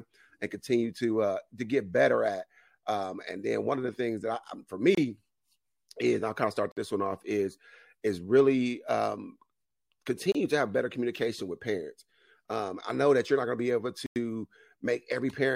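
The speech drops briefly to silence four times and resumes each time: at 4.95–4.98 s (26 ms), at 6.72–6.77 s between "I'll kind of start" and "this one off is" (52 ms), at 10.32–10.35 s just before "to have better communication" (27 ms), and at 14.06–14.16 s after "going to be able" (97 ms). These are likely Bluetooth stalls, where interference delayed packets, the headphones' buffer ran empty, and playback waited for the resent data.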